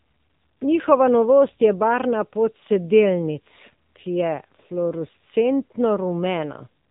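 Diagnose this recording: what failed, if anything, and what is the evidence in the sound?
The codec stage failed: the speech went through an AMR narrowband mobile codec at a low bitrate, fitting the 7.4 kbps mode. Throughout, nothing above 3.8 kHz survives, and the vocal-tract model, fed by only a few pulses per 5 ms, leaves the speech plainly buzzy and synthetic.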